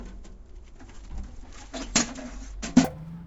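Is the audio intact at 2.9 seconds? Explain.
No. From 2.85 s to 3.26 s the sound has a wrong sample rate fault, consistent with 16 kHz material played at 48 kHz without conversion. It runs three times faster and 19 semitones higher. On a spectrogram its features shift upward threefold and squeeze horizontally.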